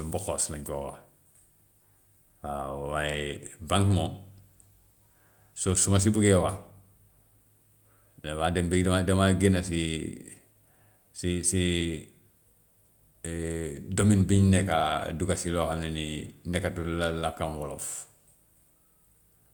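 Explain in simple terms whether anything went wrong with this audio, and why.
Nothing went wrong here.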